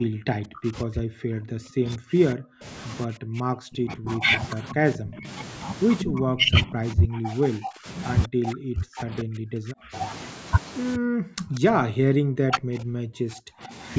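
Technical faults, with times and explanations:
0.00–2.65 s, 3.06–5.27 s, 6.03–7.87 s, 8.27–9.94 s, 10.97–13.73 s: speech suppressed in double talk. The speech dips deeply, around 40 dB (shallower, near 25 dB, at 6.03–7.87 s), likely from the echo canceller ducking during simultaneous talk.
5.99–6.05 s and 11.39–11.45 s: echo leak. A brief delayed copy of the speech arrives about 191 ms late and roughly 10 dB down, likely residual loudspeaker echo that the canceller did not remove.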